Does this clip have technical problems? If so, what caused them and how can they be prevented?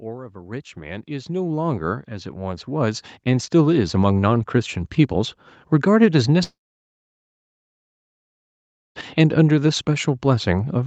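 Yes. From 0.05 to 4.8 s the level climbs by about 19 dB: automatic gain rising, where the gain control judged the input too quiet and kept turning it up. Unlike a talker moving closer, the background noise swells in step with the voice, and the rise is slow and steady rather than sudden. Starting with a sensible fixed microphone level, or a faster-settling gain control, prevents it.

At 6.43 s a long network dropout begins and lasts until 8.98 s. The last sound is stretched into a brief fading buzz, followed by about 2.4 s of near-silence, and then the audio resumes with roughly 2.5 s missing. That concealment tail and the gap in continuity set it apart from a natural pause. The likely cause is packet loss or a stalled connection on the call path, which has an 8 kHz audio bandwidth. A stable wired or stronger network link prevents it.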